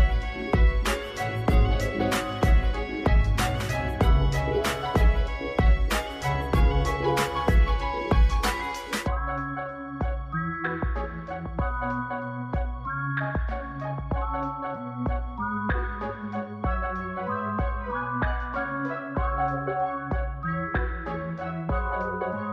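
No technical faults can be heard anywhere in this audio.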